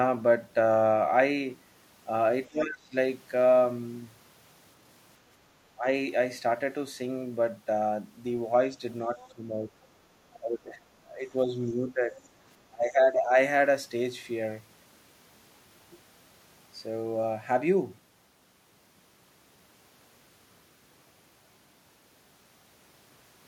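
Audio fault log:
2.49 to 13.37 s, speech suppressed in double talk: the speech sinks at 2.49–2.95, 5.76–5.86, 9.07–9.7, 10.38–12.17 and 12.68–13.37 s. The drops range from about 10 dB to about 20 dB, and the longest stretch lasts around a second and a half. The likely cause is the echo canceller mistaking simultaneous talk from both ends for loudspeaker echo and turning the wanted speech down along with it.
9.19 to 12.28 s, other side's voice leaking through: faint scraps of a second voice surface at 9.19–9.28 s and again at 12.24–12.28 s. They sit roughly 25 dB and 40 dB below the main speech. These are likely fragments of the far end's audio that the loudspeaker played into the microphone and that the echo canceller failed to subtract completely, so short residues slip past it.
9.98 to 10.1 s, background gated by the echo canceller: the room sound briefly dips by about 6 dB for around a tenth of a second, then returns. 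With the loudspeaker active, the canceller clamped the microphone level hard to keep out echo and then released it. The ambience therefore ducks and recovers in a short pump.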